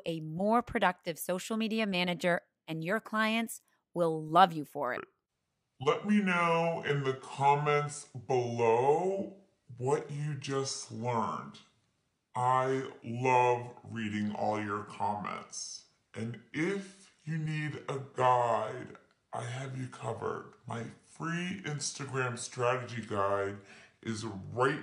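From 4.97 s to the end, a section at the wrong speed: the audio plays at 0.653 times its recorded rate. Pitch drops with it, by roughly seven semitones. Everything turns deep and slow. A player or editor running on the wrong clock is the likely cause.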